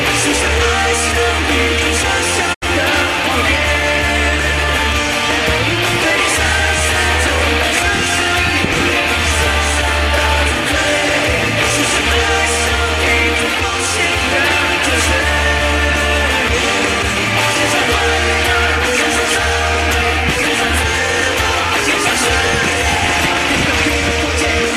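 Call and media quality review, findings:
Digital broadcast dropout, 2.53–2.64 s: sound fades out over 20 ms, then the receiver mutes on failed or missing frames; 72 ms of programme lost, which fits three dropped frames.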